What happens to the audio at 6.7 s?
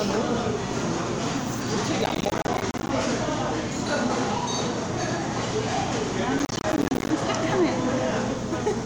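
At 6.7 s the sound is inside a burst of processor overload crackle running from 6.39 to 7.1 s. The processor keeps missing its deadlines for short buffers of around 10 ms. Dozens of them drop out as brief silences, giving a gritty tearing crackle.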